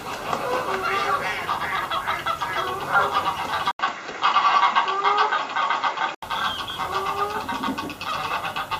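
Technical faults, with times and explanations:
1.76–2.01 s, DAB burbling: bit errors slip past error correction into the MP2 data, so individual sub-bands blip and jump in level across about 13 frames.
3.71–6.23 s, input switched to a poorer device (likely): an 80 ms gap, then narrower, duller sound, level shifted about 5 dB, new noise about 30 dB down.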